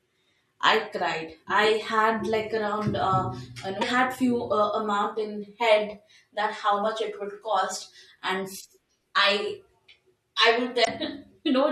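At 3.81 to 3.83 s and again at 10.81 to 10.88 s in this speech, there's damaged data in the compressed stream. The decoder hits corrupted frames, loses sync and hunts for the next valid header, leaving a brief chirp, squawk, click or short hole each time.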